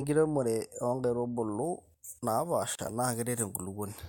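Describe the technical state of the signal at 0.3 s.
At 0.3 s the signal is intact, with no technical fault audible at that moment.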